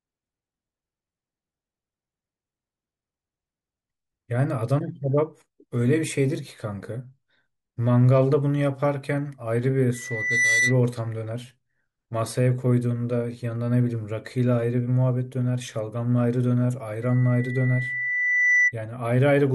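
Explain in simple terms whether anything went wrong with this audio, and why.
Loudspeaker feedback squeal at 9.94–10.80 s and 17.02–18.73 s: a 2 kHz tone swells up over about half a second, then a second and a half, because the microphone re-amplifies its own loudspeaker. A steady hum would not build up like this.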